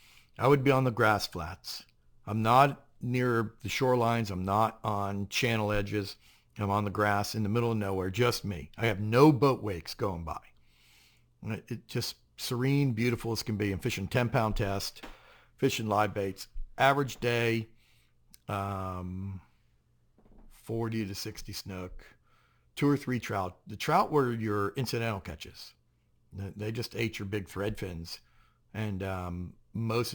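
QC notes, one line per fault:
Throughout: imaging from sample-and-hold upsampling. A bright, metallic fizz rides on top of the speech, rising and falling with it, and its lowest band moves opposite to the pitch. It sits roughly between 11 and 22 kHz, about 23 dB below the signal. The sound points to a source near 22 kHz raised to 48 kHz by simply repeating samples, with no smoothing filter to remove the mirrored spectrum.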